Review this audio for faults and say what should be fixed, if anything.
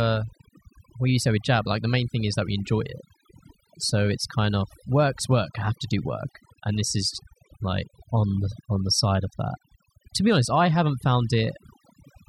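Overdone noise removal runs through the whole clip. The noise reduction was set far too hard. Any frequency band close to the estimated noise level gets pushed right down or switched off. Quiet parts of the speech fall into that range and are cut along with the noise. The pauses sink to near silence, dotted with twinkling specks. Prevent this by applying gentler reduction, with less attenuation, and checking the result by ear.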